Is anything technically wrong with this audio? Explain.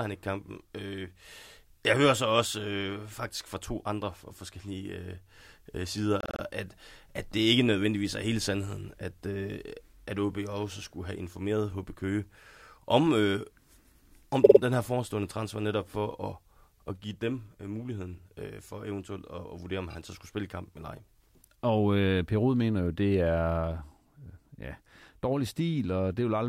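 Yes. Repeated frames occur at 6.21–6.42 s before "at at det ikke", at 14.43–14.59 s before "den her forestående transfer", and at 19.89–19.95 s before "han så skulle spille". Stretches of compressed audio were decoded again, so the same slice replays as a rapid stutter. A 52.2 ms block plays four and then three extra times, and a 26.1 ms block twice, stretching the audio by about 0.42 s in total.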